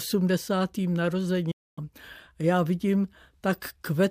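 At 1.51 s the speech drops out in a digital broadcast dropout. The receiver stopped getting valid frames and muted. The sound fades to silence over 8 ms and returns at 1.78 s. That gap fits roughly eight lost 32 ms frames.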